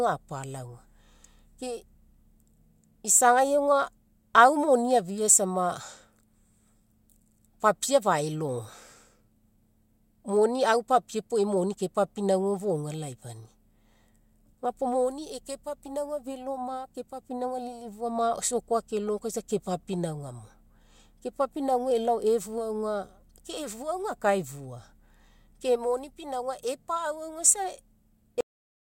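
Right at the end, at 28.41 s, the speech just stops dead. That's a cut-off end: the final stretch of audio, the last half-second or so, never made it out, most likely because the closing buffers weren't written or played before the stream shut. So instead of a word trailing off naturally, the sound is chopped mid-flow and drops straight into digital silence, with no decay or room tail at all.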